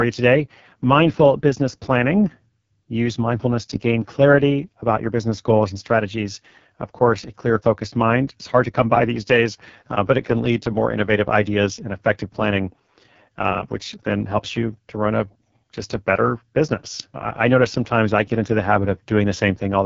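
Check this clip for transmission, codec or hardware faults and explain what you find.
Throughout the speech, the audio has passed through the AMR wideband (HD Voice) codec at its lowest rate, which fits a 6.6 kbit/s AMR-WB link. At that rate the coder's pulse-driven vocal tract model has too few bits to follow the speech, so the damage is heavy: voiced sounds come out rough and raspy. Nothing reaches above about 7.3 kHz, and the top band from 6.4 kHz up is synthetic shaped noise rather than real detail.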